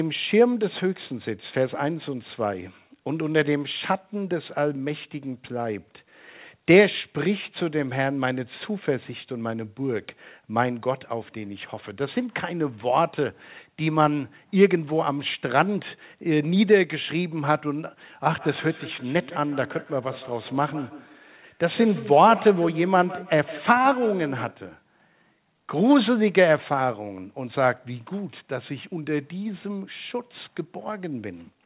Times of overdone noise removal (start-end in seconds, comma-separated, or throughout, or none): none